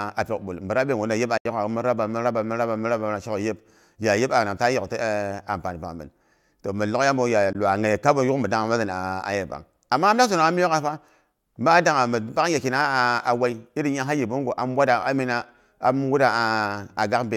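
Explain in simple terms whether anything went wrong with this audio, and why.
Yes, something went wrong. The speech cuts out twice, very briefly. The first gap runs from 1.37 to 1.46 seconds. The second, shorter one is at about 7.53 to 7.55 seconds. Each is a sudden hole of silence. Afterwards the speech comes back further along, as if it kept playing during the gap. This sounds like a Bluetooth dropout. The likely cause is wireless audio data arriving at the headphones too late and being thrown away.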